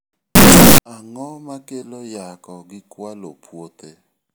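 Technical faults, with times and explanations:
0.35 to 0.78 s, signed and unsigned mixed up: the 16-bit samples were likely read with the wrong sign convention, flipping the top bit so each zero crossing jumps across the full range. The speech becomes a very loud, harsh distortion, and quiet moments are as loud as everything else.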